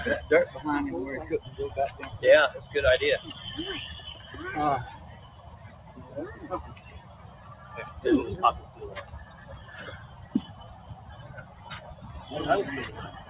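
The sound passes through a speech noise suppressor that was left engaged. It treats sustained tones, ambience and decays as noise, so the level pumps and thins across the clip, with gain swinging by around 15 dB as transients slip through and held material is pulled down. Within that, the noise suppressor cuts specific passages harder. Steady or decaying content sinks by about 6 dB at 4.99–6.12 s, about 5 dB at 6.75–7.71 s, about 4 dB at 9.04–9.43 s, and about 5 dB at both 10.08–10.34 s and 10.73–11.12 s. The call path is band-limited, with nothing above 4 kHz, which fits G.711 mu-law coding.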